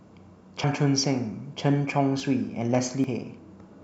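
At 0.64, 2.2 and 3.04 s the speech jumps ahead, skipping roughly 70, 40 and 100 ms, likely a dropped buffer (overrun). The waveform shows abrupt splices, with no gap.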